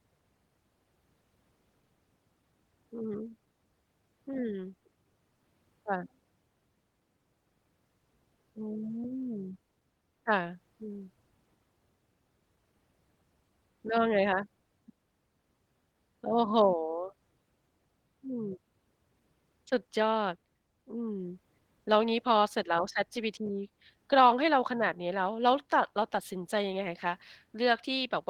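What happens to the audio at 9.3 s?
Nothing goes wrong at 9.3 s; the speech carries on intact through that moment, with no dropout, click, distortion or other fault to be heard.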